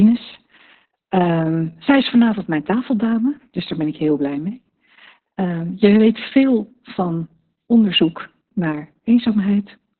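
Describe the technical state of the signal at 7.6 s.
At 7.6 s the speech carries heavy Opus voice compression, present throughout the clip. Nothing sounds above about 4.3 kHz, pointing to the narrowband SILK mode at roughly 6 kbps, where coarsely coded excitation leaves the speech muffled, hoarse and slightly robotic.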